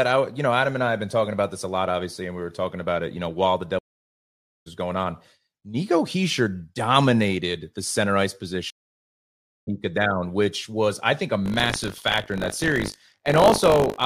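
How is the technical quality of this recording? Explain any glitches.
There are three clear glitches: two dropouts where the stream reconnects, and a buzzing tear that runs from 11.44 s to the end.

The first stream reconnect hits at 3.79 to 4.68 s, right after "you know while the". The audio goes dead for about 0.87 s and comes back at "going on", having jumped ahead by roughly 0.7 s. The connection dropped, the player sat silent, then reopened the stream with a fresh decoder at the live position. The second one, at 8.70 to 9.68 s after "dominated the center ice", is silent for about 0.97 s and skips roughly a second.

From 11.44 s, just after "was I think a", there's buffer tearing. The writing side and the hardware reading the ring buffer have drifted out of step, so every period gets a small slice, roughly a tenth, of audio from about 40 ms earlier, with hard joins on both sides. That produces a robotic 50 Hz rattle, which fits a 20 ms period, and it's only there while someone is talking.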